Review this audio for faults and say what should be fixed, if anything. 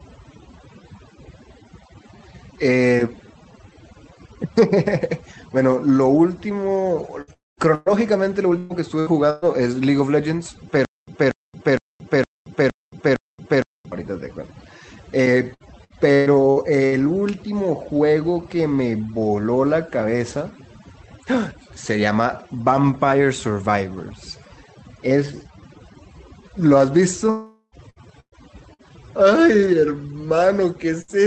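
Overdone noise removal runs through the whole speech clip: the denoiser is gating quiet bands along with the noise, so the background twinkles. Back the reduction strength off.

Repeated packet loss (robotic sound) hits at 7.21–9.45 s, 15.54–16.95 s and 27.90–28.82 s, with repeated holes up to about 120 ms patched by stretching earlier sound, so it goes choppy. A steadier network or stronger FEC would help.

A long network dropout likely explains 7.33–7.60 s and 27.30–27.75 s: the last sound drags on and fades, then audio resumes further along with roughly a quarter-second and 0.42 s gone. Fix the connection stability upstream.

The stutter with silent gaps at 10.85–13.92 s is likely a stalled stream retrying: a 0.24 s fragment repeats six times, every 0.46 s, separated by digital silence. Bigger buffering on the player side should stop it.

A burst of packet loss at 31.02–31.11 s leaves about 60 ms patched with a fading continuation of the previous sound before the audio carries on. 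Better loss protection on the link would cover this.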